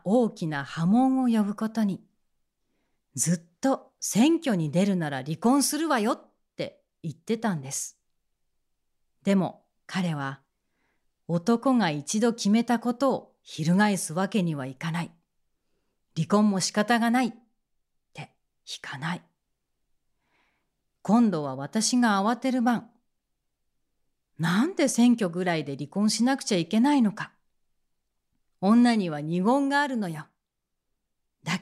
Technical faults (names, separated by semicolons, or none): none